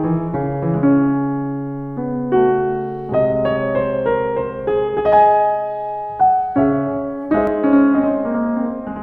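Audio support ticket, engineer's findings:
Channel delay (doubling) from 7.47 s to the end of the music. Every attack repeats about 93 ms later as a slap echo at equal level. One channel runs a buffer late before the mono sum. The offset fits a 4096-sample buffer.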